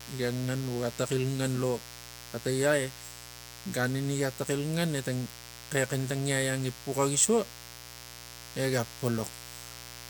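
A steady, raspy buzz sits under this speech clip from start to finish, fairly prominent: mains buzz at 60 Hz, with spiky harmonics reaching several kHz from rectifier or dimmer switching.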